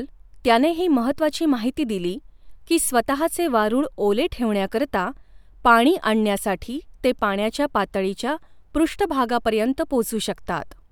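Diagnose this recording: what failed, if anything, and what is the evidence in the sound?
No faults detected in this recording.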